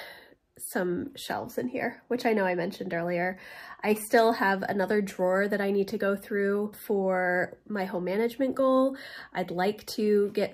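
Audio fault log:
Nothing to log here; I didn't hear anything go wrong anywhere in this one.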